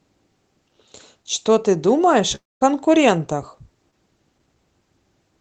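From 2.35 to 2.63 s there's what sounds like a long network dropout, likely the link going quiet. The receiver stretches the last sound into a fading buzz, then there's mostly silence, and the audio resumes with about a quarter second simply gone.

Then around 3.91 to 3.94 s you get a short concealed packet loss: roughly 20 ms never made it to the decoder in time, so the gap was patched by extending the preceding sound and blending back. It comes across as a quick smear, with the top end capped near 8 kHz as Opus narrows it.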